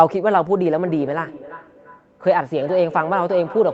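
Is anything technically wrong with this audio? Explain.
Yes. Feedback echo between two devices runs from 0.83 s to the end of the clip, at 3.73 s. Two devices in the same room are on one call, and one plays back what the other's microphone sent; that microphone hears it again. Each echo canceller removes only its own device's playback, so this loop goes unchecked. The speech returns roughly every 0.3 s, thinner and more ringing each pass, peaking about 15 dB below the direct speech.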